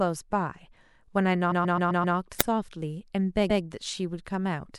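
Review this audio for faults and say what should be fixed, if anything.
Repeated frames occur at 1.51 to 2.16 s, where the same 130.6 ms stretch of speech plays five extra times, and at 3.49 to 3.62 s, where it plays once more. A run of compressed frames was sent or written again, which fits about five frames per block, adding 653.1 ms and 130.6 ms. Unlike a looping playback buffer, each repeat is a whole decoded chunk. Deduplicate frames by sequence number or timestamp before decoding.

An uninitialised buffer cracks at 2.41 s, a loud 1.33 ms crack, which fits a 64-sample block played before any audio was written into it, so stale memory became samples. A splice click is a single step; this is a brief crack made of leftover memory values. Zero-fill buffers on allocation and play only blocks marked as written.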